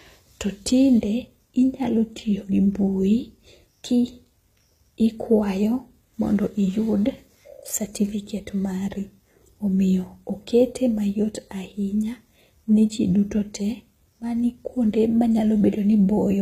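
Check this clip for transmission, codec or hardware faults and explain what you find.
One codec fault runs through the whole speech clip. HE-AAC compression, throughout: the treble is likely rebuilt from copied lower bands, so s sounds turn plainly gritty and lispy. That fits roughly 20 kbps, with nothing above 14.9 kHz.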